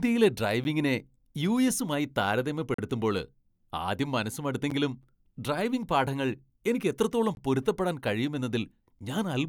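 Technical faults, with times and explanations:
0.64 s, block of digital silence: the output buffer likely went unfilled in time, so about 11 ms, which fits a 512-sample block, dropped to zero with no fade and left a sharp tick.
2.74–2.78 s, block of digital silence: a longer underrun of about 43 ms, which fits 2048 samples, cuts the speech into a short hole.
4.70 s, block of digital silence: after "ആദ്യം മനസ്സ്", another 11 ms zeroed block gives a tick.
7.35–7.37 s, block of digital silence: after "ഡ്രൈവിംഗ് പാഠങ്ങൾ എനിക്ക് എത്രത്തോളം", a gap of about 21 ms, which fits 1024 samples, cuts out the sound with no fade.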